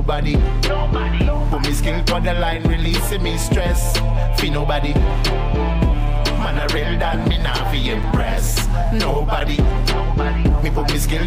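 Two short blocks of digital silence break the sound, at 8.03 s and 9.40 s. The first lasts 5.8 ms, which fits a 256-sample buffer. The second lasts about 8.7 ms. In each, the signal drops straight to silence and returns with no fade. Both gaps are well under 15 ms, so each is heard as a tick or dip rather than as silence. The likely cause is the program failing to fill its output buffer in time.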